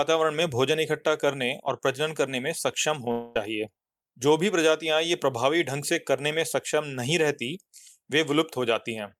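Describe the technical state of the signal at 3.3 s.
At 3.3 s the speech is inside a gap from 3.11 to 3.36 s, likely a long network dropout. About 240 ms never arrived. The receiver fills it by stretching the last sound into a fading buzz. Speech then resumes with that part missing.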